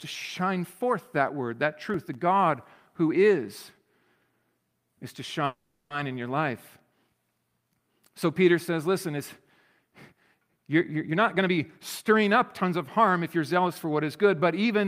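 From 1.90 to 2.15 s a short burst of gritty crackle tears through the speech, made of tiny hard-edged dropouts to silence. This is processor overload crackle: the processor fell behind and missed about seven buffer deadlines. Each miss left a silent hole, and each hole fits buffers of roughly 1.5 ms. The grit stops as soon as the load eases.

At 5.45 s the speech stalls for about 450 ms, until 5.92 s. The last sound is stretched into a fading buzz or hiss that sinks into about 110 ms of silence, and then the speech resumes exactly where it stopped, with nothing lost. This call audio freeze is likely caused by delayed packets draining the jitter buffer. The receiver filled the wait with concealment and played everything once the packets arrived, which left the audio about 450 ms later than before.

From 11.11 to 11.58 s the speech suddenly sounds hurried, running at roughly 129% speed while the pitch stays the same. 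This is jitter buffer speed-up: to shed excess delay, the receiver cut out short pitch-period slices repeatedly, about 150 ms in total. A gentler pass follows from 12.11 s to the end, at 108% speed, removing around 200 ms more, and the speech there sounds slightly rushed.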